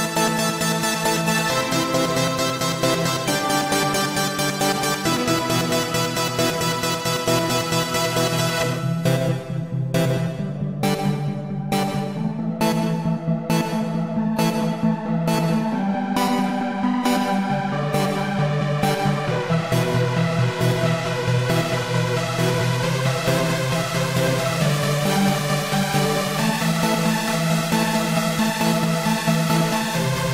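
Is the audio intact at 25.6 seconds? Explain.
Yes, at 25.6 seconds the audio plays through intact, with no dropout, click, distortion or other fault at that point.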